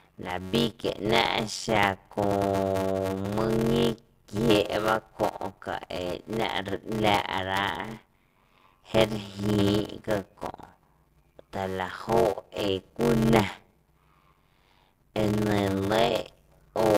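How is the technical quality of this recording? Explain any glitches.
The recording has a steady technical fault from start to finish: a block size mismatch (padded), which puts a buzz under the speech and slows it down. One stage hands over audio in shorter blocks than the next stage reads, which fits about 320-sample writes into a 512-sample read. Each block is topped up with zeros, so a short silent gap repeats 93.8 times a second. That is heard as a constant buzz at 93.8 Hz. The speech also runs at 0.625 times normal speed but at about its usual pitch. On a waveform, the speech looks chopped into regular slices, each ending in a flat run of silence. On a spectrogram, thin vertical gaps repeat evenly across the whole clip, with a comb of harmonics spaced 93.8 Hz apart.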